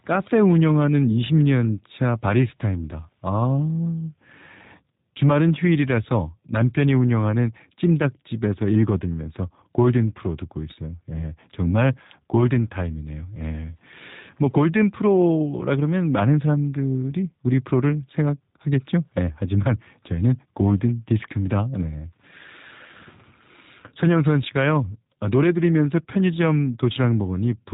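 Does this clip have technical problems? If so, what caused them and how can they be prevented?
Yes. Throughout the speech there is G.729 codec damage. Nothing above 3.8 kHz survives, and the voice has a rough, slightly buzzy, synthetic quality, which fits an 8 kbit/s G.729A stream. The codec rebuilds each 10 ms frame from a vocal tract filter, a pitch predictor and a few pulses rather than keeping the waveform. That modelled texture is what separates it from a plain narrowband telephone filter, which dulls the top but leaves the remaining sound clean. To prevent it, record or carry the call with a wideband or higher-bitrate codec, such as G.722 or Opus, instead of G.729.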